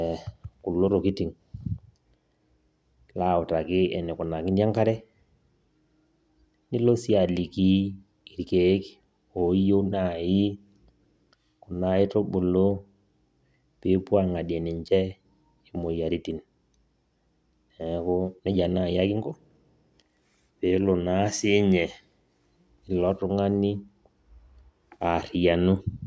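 No technical faults can be heard anywhere in the speech recording, so there is nothing to place in time or explain.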